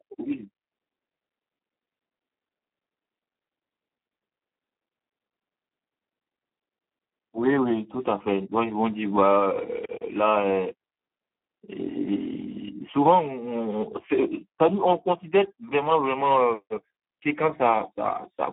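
From start to finish the speech runs through the Speex codec at a very low setting, with damage that points to roughly 8 kbps. At that rate the CELP coder has almost no bits left for the excitation signal, so the voice comes out hoarse, noisy and edging toward robotic. The line band sits between about 200 Hz and 3.5 kHz, and nothing is heard above 3.8 kHz, leaving the sound dull and telephone-narrow.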